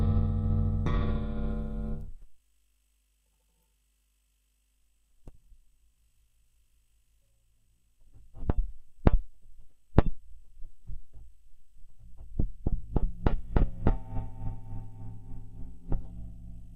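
Nothing stood out on listening to this recording of sounds.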